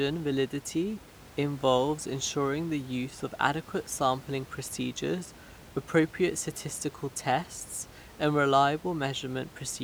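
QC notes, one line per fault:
No fault to note.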